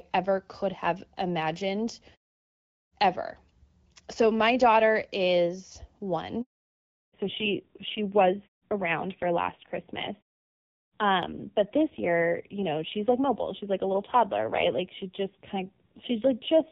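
A handover gap runs from 6.41 to 6.69 s, about 280 ms of silence cut into the speech. The call was moved from one network link to another, and no speech frames reached the receiver while the switch took place. The voice dies away within a few tens of milliseconds and nothing is heard until the new link begins delivering audio, so whatever was said in that stretch is simply gone.

A fallback to narrowband follows at 6.69 s and lasts to the end of the clip. Before the handover the call was carried in HD Voice, with the crisp upper range that suggests AMR-WB at around 12.65 kbit/s. After it, everything above 4 kHz is missing. The voice turns muffled and duller, and it also picks up a rough, grainy edge, which points to the older AMR-NB codec running at a low rate near 5.9 kbit/s.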